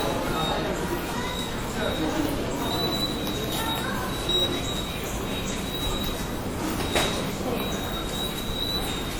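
WMA compression runs throughout the clip. The sound rings and washes, with a hiss that rises and falls alongside it, likely from a transform codec quantising long blocks coarsely, which fits a low bitrate around 48 kbps; content stops near 20.1 kHz.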